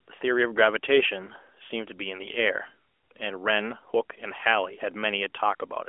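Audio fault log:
No faults found in this speech; the narrowband mobile-codec path behaves as expected, with nothing passing above about 3.7 kHz and only light codec colouring that fits a 12.2 kbps AMR-NB mode.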